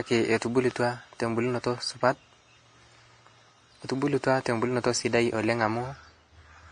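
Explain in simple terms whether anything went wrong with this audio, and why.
Two things went wrong with this speech clip.

First, the whole thing has the mixed-up artefacts of transcoding between lossy codecs. It was likely squeezed by one compressed format and then re-squeezed by another, WMA. The second encoder wasted effort preserving the first one's flaws and added its own, so both kinds of damage pile up. Everything above about 10.6 kHz is gone too, which is why it sounds dull and lacks sparkle throughout.

Second, there's a loud pop from 0.71 to 0.73 s, a single sharp click that jumps out well above the speech, which keeps going underneath it. Something likely fed a sudden jolt of voltage into the signal, such as a plug, a switch, a bit of static or a driver hiccup. The pop is brief but very noticeable.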